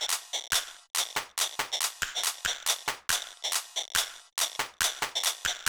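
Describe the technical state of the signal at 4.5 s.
At 4.5 s the sound falls inside a run of regular clicks, pops recurring every 1.42 s from 1.33 s to 5.59 s, about four in all. This is clock drift buffer slips, likely from two devices on separate clocks differing by a few hundred parts per million, so the buffer between them drifts until it drops or repeats a small block of roughly fifteen samples, leaving a brief discontinuity heard as a click wherever signal is present.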